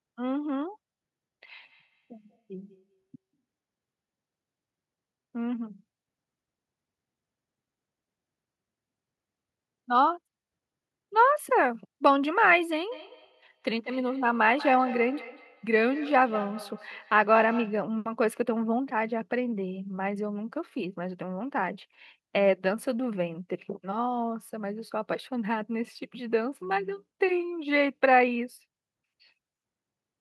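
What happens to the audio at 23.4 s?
Nothing goes wrong at 23.4 s: the speech plays through that moment intact, with no dropout, click, distortion or other fault.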